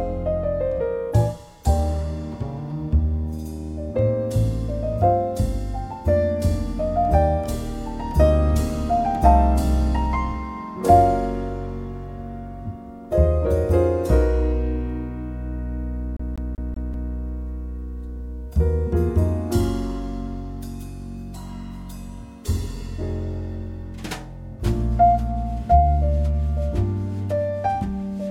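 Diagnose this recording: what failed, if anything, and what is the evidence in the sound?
The failure is at playback, from the disc transport: a CD stuck on one turn. From 16.17 s to 17.13 s, the same slice of about 0.19 s plays five times in a row, with a brief mute at each jump, giving a fast, even stutter. A damaged spot throws the laser back one track every revolution, so it rereads the same section. On a waveform, identical blocks repeat with tiny gaps; a spectrogram shows a stamped pattern broken by narrow silent columns.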